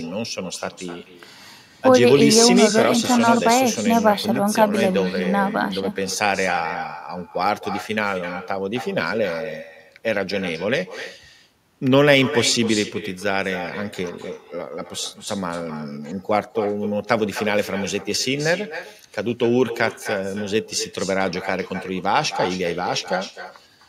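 Throughout the speech, an echo with no canceller trails each phrase by roughly a third of a second, about 12 dB below the talker and thinner. The far end's loudspeaker audio reaches its microphone and returns unremoved, giving a distinct delayed repeat rather than reverberation's continuous smear.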